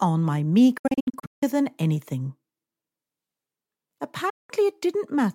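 The audio has two digital broadcast dropouts: short muted holes scattered from 0.78 to 1.43 s, the longest run 160 ms, and a single gap from 4.30 to 4.50 s. Unlike concealed packet loss, nothing is smeared or repeated. The receiver mutes with an 8 ms fade and resumes with the missing material gone.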